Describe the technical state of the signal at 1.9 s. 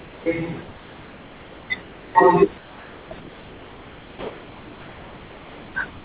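Comfort noise in place of the background, from 1.82 to 2.15 s: the room's textured background becomes a steady, featureless hiss about 2 dB quieter. The likely cause is the sender pausing transmission in silence while the receiver synthesises shaped noise to fill the gap.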